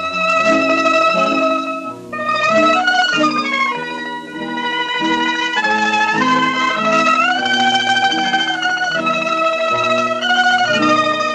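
Nothing in the audio stood out as a problem on listening.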